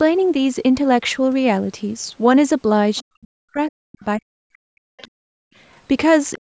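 Around 2.96 to 3.04 s there's a brief scrap of the other side's voice leaking through, sitting roughly 25 dB under the speech. The echo canceller most likely didn't fully strip the loudspeaker playback out of the mic, and it comes back in short fragments at 4.97 to 5.01 s, 5.73 to 5.8 s and 6.34 to 6.39 s, faint at its quietest, around 40 dB down.

Right as that first leak lands, from 3.0 to 5.41 s, the talker's speech gets suppressed in double talk. It dips hard and comes and goes, dropping by up to about 40 dB across roughly two seconds. It happens again from 6.39 s to the end. The likely cause is both sides talking at once, so the canceller ducks everything.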